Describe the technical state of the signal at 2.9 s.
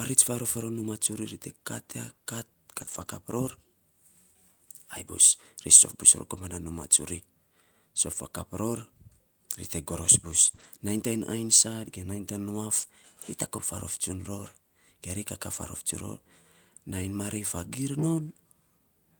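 At 2.9 s the speech is in a lost packet rebuilt from error correction, spanning 2.89 to 3.07 s. The decoder plays a low-bitrate copy carried in the next packet, so there is no gap, but the sound is rougher and noisier. On a spectrogram this appears as a grainier, smeared texture, and the waveform looks coarser. An earlier rebuild covers 2.77 to 2.83 s.

Just before, from 2.85 to 2.89 s, is a short concealed packet loss. The receiver extends the preceding sound and then blends back into the real audio, which is heard as a brief smear or wobble.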